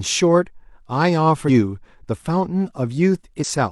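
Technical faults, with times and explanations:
1.44–1.50 s and 3.39–3.45 s, compressed frames skipped: the speech lurches forward by roughly 150 ms, about three 46.4 ms frames, with no silence gap.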